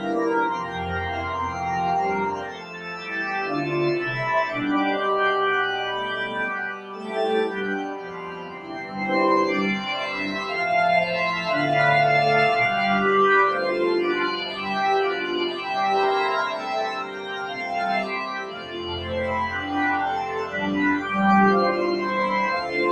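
Throughout the clip, the sound pumps and thins out. Sustained parts and decaying tails sink by around 10 dB while sharp attacks still punch through. This is a noise suppressor applied to music or sounds: a speech-tuned processor is mistaking steady tones and ambience for background noise and turning them down.

Sound cut by the noise suppressor appears as distinct sags where held material drops or its decay is clipped short. These occur at 0.64–0.92 s (about 6 dB), 2.35–3.08 s (about 8 dB), 6.72–7.17 s and 7.48–8.97 s (about 10 dB each), 14.47–14.62 s (about 4 dB), 16.92–17.72 s and 18.23–19.11 s (about 8 dB each), and 20.27–20.54 s (about 7 dB). In each, the suppressor judged the passage to be noise and attenuated it harder than its surroundings.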